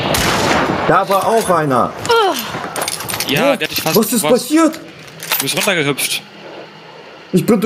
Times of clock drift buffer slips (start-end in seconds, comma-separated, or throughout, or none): none